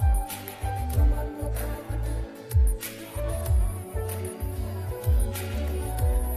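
No technical faults are audible anywhere in the audio.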